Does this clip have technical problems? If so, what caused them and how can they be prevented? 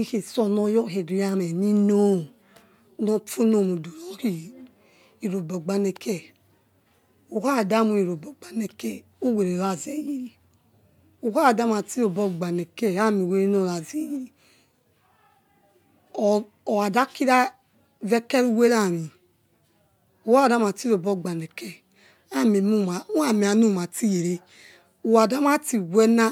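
No, there are no technical faults to hear in this speech recording. Since nothing went wrong, there is no cause to trace and nothing that needs preventing.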